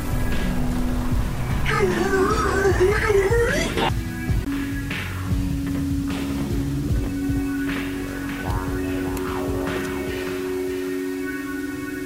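From start to end, the sound carries a grainy distortion that follows it. Quiet passages turn gritty. The softest moments sputter or fall silent. This is low bit depth without dither. The error sits roughly 25 dB below the signal. Its likely cause is plain rounding, with steps that fit 6 bits.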